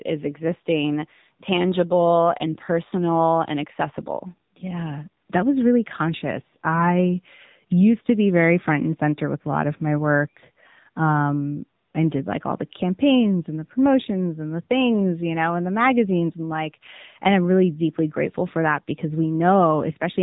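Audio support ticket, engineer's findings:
AMR narrowband mobile codec, throughout. Nothing above 3.8 kHz. Buzzy, synthetic speech from sparse pulse coding. Damage plainly audible; fits about 7.4 kbps.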